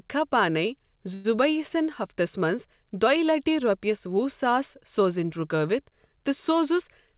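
At 1.14 s the speech stalls for about 0.1 s, smeared into a brief fading buzz before picking up again at 1.26 s with nothing lost, likely a call audio freeze.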